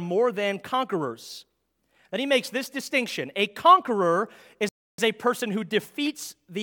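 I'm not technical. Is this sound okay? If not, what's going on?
No. At 4.69 seconds the speech cuts out and the line goes silent for about 0.3 seconds, until 4.98 seconds, when the sound comes back. This is a playback stall. The likely cause is that the player ran short of incoming audio, or was briefly held up doing something else, so it had nothing to send to the speaker until it caught up.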